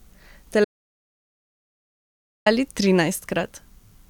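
Speech recording with an audio dropout to silence from 0.65 s to 2.46 s: about 1.8 s of silence with no room tone, a flat line on the waveform and a blank band across every frequency on the spectrogram, likely from a lost input or stray mute.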